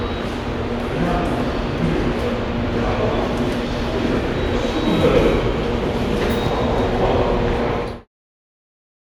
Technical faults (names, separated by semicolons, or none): none